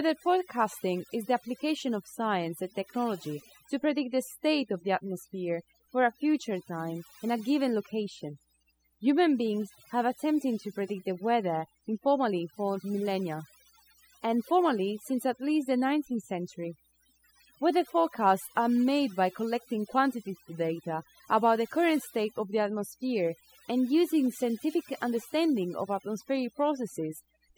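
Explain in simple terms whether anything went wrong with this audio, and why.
Mains hum runs under the whole recording: a steady low 60 Hz buzz, fairly loud against the speech, from power wiring leaking into the signal, probably through a ground loop.

There's also overdone noise removal throughout. The cleanup was pushed too hard, so the background drops and breaks up into little twinkles, and quiet parts of the speech get swallowed along with it.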